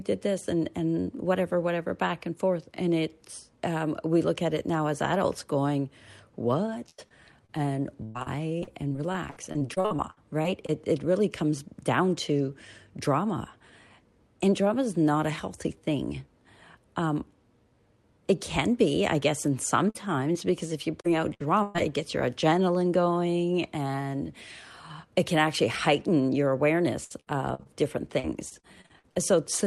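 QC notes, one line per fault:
6.89–10.70 s, repeated packet loss (robotic sound): about twenty gaps land in under four seconds, the longest about 100 ms. Each one gets patched by stretching the last bit of sound, so roughly a fifth of that stretch is filled in, giving choppy audio with chunks missing.
19.90 s, 20.32 s and 21.01 s, short concealed packet loss: three tiny holes of about 20 to 40 ms each, the first right after "be I guess and". The decoder carries the previous sound through and blends back, so you hear a quick smear or wobble, and a short consonant can get swallowed.
21.34 s and 21.63 s, burst of packet loss: two longer drops of about 60 ms and 120 ms, the second just before "it gets your adrenaline". The receiver keeps extending the last sound and fades it as the gap goes on, so you get a held buzz or fading hiss, then the audio jumps ahead with that piece gone.
27.04–29.17 s, repeated packet loss (robotic sound): same pattern again, with about a dozen gaps up to about 60 ms across two seconds and around a fifth of the span filled in. 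It turns choppy, with bits missing.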